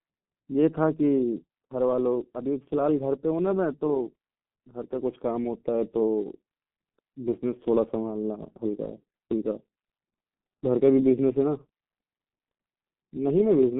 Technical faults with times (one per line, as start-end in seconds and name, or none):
0.00-13.79 G.723.1 codec